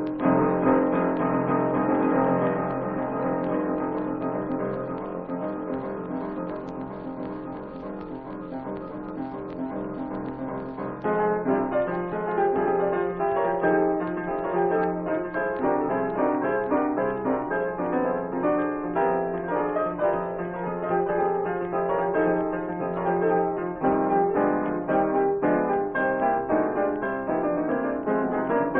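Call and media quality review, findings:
Doubled audio track, whole clip: second full-band copy trailing by about one second, roughly 5 dB down. Likely cause: the same feed captured again through a slower path, or an edit holding two offset copies. Unlike acoustic echo or reverb, there is no decay, no room colouring, and no further repeats, just one clean, fixed-lag duplicate.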